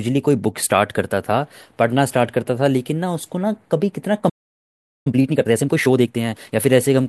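At 4.29 s the speech cuts out in mid-flow and stays silent until 5.07 s, a gap of about 0.76 s. This is a playback stall, likely caused by the player running short of buffered data or its output thread being blocked.

From 5.07 s to 6.59 s the speech runs hurried at roughly 1.5 times normal speed, pitch unchanged. This is time-compressed catch-up: the player trims small slices and cross-fades the joins to clear the backlog left by the stall.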